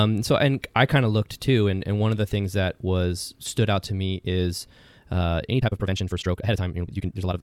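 From 5.49 s to the end, a time-stretched section plays speech at nearly double speed (1.97x) with pitch unchanged, sounding rushed; likely from dropped short pieces; spectrogram shows compressed syllables, stable harmonics.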